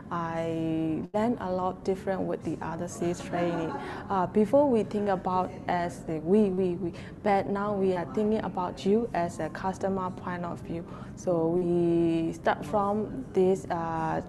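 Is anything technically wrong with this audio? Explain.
Yes, there are dropouts from packet loss at five points.

From 1.05 to 1.15 s, the sound freezes into a held buzz or fading hiss for about 80 ms, then jumps forward with roughly 80 ms of material gone. This is a burst of packet loss. Several consecutive packets arrived too late or not at all, so the receiver stretched the last sound, lowering its level through the gap, and resumed playback further on.

Shorter blemishes occur at 5.03 s (about 24 ms), 6.54 s (about 35 ms), 7.93 s (about 22 ms) and 11.58 s (about 39 ms). Each is a quick smear or wobble where a brief sound may vanish. These are short concealed packet losses. A few hundredths of a second failed to reach the decoder in time, and the receiver improvised a substitute from the preceding pitch or as shaped noise before blending back into the real audio. The top end stops around 12 kHz, consistent with an Opus call path at roughly 64 kbps.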